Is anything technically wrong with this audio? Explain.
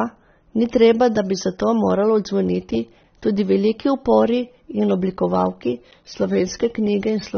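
Yes. Throughout the speech, likely AAC compression, consistent with a low bitrate around 24 kbps, removes everything above 6.3 kHz and coarsely quantises the remainder, leaving the speech dull with plainly audible smeared, fizzy sibilants.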